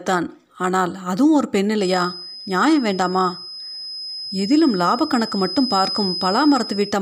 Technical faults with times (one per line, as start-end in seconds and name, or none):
1.75-7.01 feedback whistle